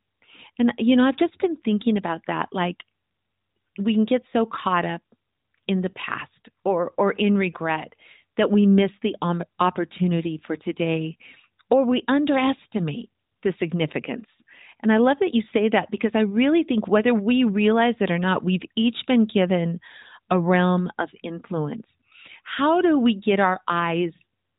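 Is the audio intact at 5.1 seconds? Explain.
Yes, the audio is intact at 5.1 seconds, with no fault at that moment.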